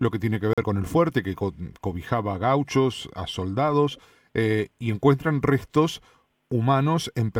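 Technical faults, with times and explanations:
0.53 to 0.64 s, digital broadcast dropout: after "que tiene que" the audio mutes for about 0.1 s and resumes at "con el fuerte que". The gap fits one corrupted frame of about 43 ms being discarded by the receiver. It shows as a flat waveform and a blank vertical band across all frequencies on a spectrogram.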